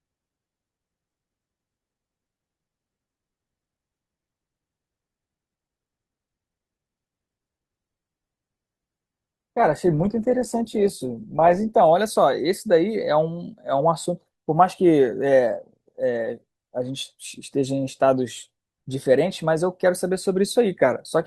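From 7.78 s to 11.78 s the speech suddenly takes on more codec artefacts, then snaps back with no gap. An adaptive stream at a lower bitrate caused this, the four-second dip fitting a switch from roughly 64 to 16 kbit/s Opus.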